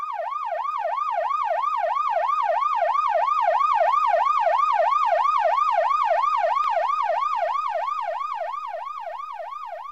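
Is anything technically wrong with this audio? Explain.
No, nothing technically wrong can be heard here.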